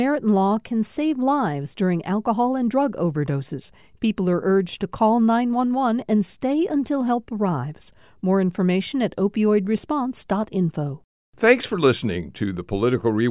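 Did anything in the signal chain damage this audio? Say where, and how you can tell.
No, nothing in the signal chain audibly damaged this speech recording, and the signal holds steady and intact at every stage from capture to playback.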